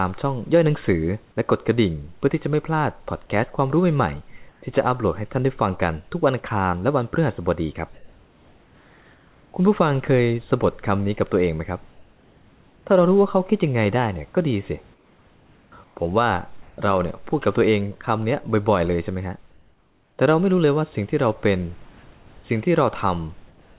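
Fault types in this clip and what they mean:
Comfort noise in place of the background: at 4.5 to 4.62, 11.92 to 12.86, 14.94 to 15.96, 19.5 to 20.18, 21.92 to 22.26 and 23.48 to 23.78 s, the pauses between speech lose their room noise and turn into a smooth, featureless hiss. At 11.92 and 19.5 s it is about 2 to 3 dB quieter. This is likely discontinuous transmission: the sender stops when it hears no speech, and the receiver synthesises shaped noise until speech resumes.
Sound dropped by the voice detector: at 16.62 to 16.78 s, about 70 ms of speech is cut and replaced by the same steady synthetic noise, so the sound briefly falls away and then returns. The likely cause is the sender's voice detector judging that quiet stretch to be background and pausing transmission, with the receiver filling the 160 ms gap with comfort noise until the detector triggers again.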